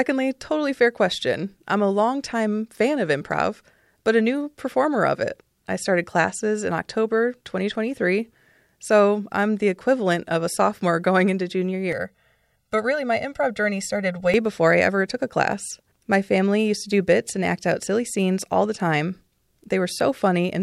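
Between 11.93 and 14.34 s, channel delay causes comb filtering: one channel lags about 1.5 ms, hollowing the sound with fixed, evenly spaced spectrogram notches from near 300 Hz.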